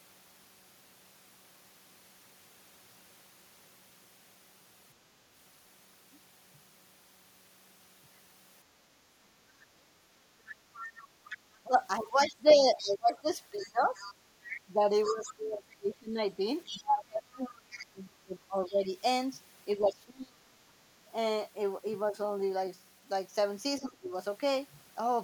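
Between 9.03 and 10.13 s the background is gated by the echo canceller. While the loudspeaker was active, the canceller clamped the microphone path to keep echo out, and the room sound took the hit. The ambient bed dips by about 6 dB, adding up to roughly a third of a second, and comes back when the canceller releases.

From 10.75 to 17.59 s the other side's voice leaks through. Part of the far-end signal playing on the talker's loudspeaker was likely not cancelled before reaching the microphone. A second voice can be heard under the main one, around 15 dB quieter. A much fainter scrap, about 30 dB down, slips through again at 18.68 to 18.73 s.

Overlapping that stretch, from 11.3 to 20.4 s, the speech is suppressed in double talk. With both ends speaking at once, the canceller likely could not tell the near talker from the returning echo, so it attenuated everything. For around five seconds in total the talker's speech sinks, by as much as roughly 25 dB at its deepest. 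The same happens again, more briefly, between 23.79 and 24.13 s, where the speech drops by roughly 15 dB for about a third of a second.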